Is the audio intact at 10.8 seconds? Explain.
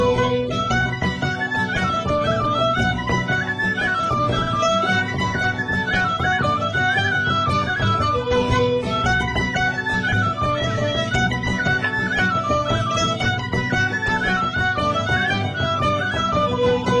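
Yes, the audio at 10.8 seconds is intact, with no dropout, glitch or other fault at that point.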